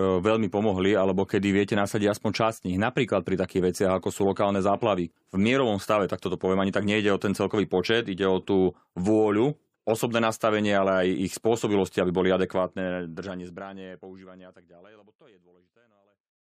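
No technical faults are present in this speech recording, and the only level change is a deliberate, smooth fade-out that begins at around 12.5 s and reaches silence at 16.4 s with no click or hard edge.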